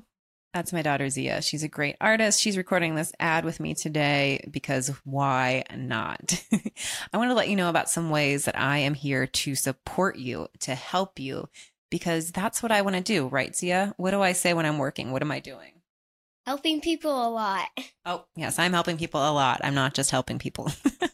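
Nothing in the recording stood out as a technical fault on listening.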